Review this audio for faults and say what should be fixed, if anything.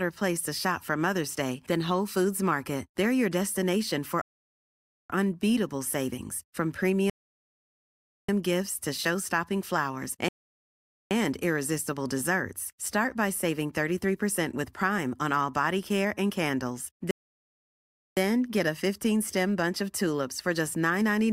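The player repeatedly drained its buffer of downloaded audio faster than new data arrived, producing four rebuffering stalls in the speech. Each time, playback halts into silence and then picks up exactly where it stopped, so nothing is missing but the delivery gains dead air: 4.21 to 5.10 s (0.88 s added), 7.10 to 8.29 s (1.19 s), 10.29 to 11.11 s (0.82 s), and 17.11 to 18.17 s (1.06 s). To prevent these stalls, build a larger buffer before playback starts and switch to a lower bitrate when throughput drops.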